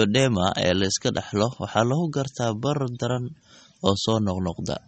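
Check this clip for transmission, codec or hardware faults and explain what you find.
There's one fault, and it runs through the whole clip: MP3 compression. Nothing comes through above about 8.4 kHz, so the speech sounds dull and the s sounds lose their bite. The damage is plainly audible, with a watery, swirly texture as quiet detail drops in and out between frames. That's what a starved encoder does: it chops the treble and zeroes weak bands, which points to something like 32 kbps and likely an MP3 encode.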